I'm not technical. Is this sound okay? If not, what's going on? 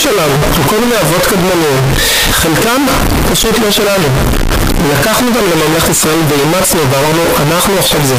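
No, it's not okay. From start to finish the speech sounds blasting loud and harsh, with background hiss as loud as the talking, though you can still follow the pitch. That's likely a float read as integer problem, where decimal-style sample numbers get misread as whole numbers.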